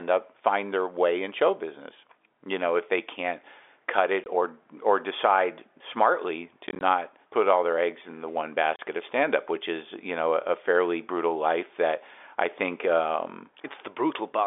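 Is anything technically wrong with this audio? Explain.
Yes. The speech has short, hard-edged dropouts from packet loss filled with silence. They occur at 4.24 to 4.26 s (20 ms), 6.67 to 6.81 s (scattered holes totalling 70 ms), and 8.76 to 8.79 s (30 ms). These gaps fit 10 ms packets replaced by silence. The band-limited telephone sound of G.711 coding is present throughout.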